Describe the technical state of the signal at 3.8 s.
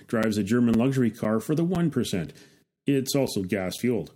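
A gap between chunks occurs at 3.78 s: the speech stops for about 7 ms at a half-second chunk join, leaving a short, hard-edged hole with nothing lost.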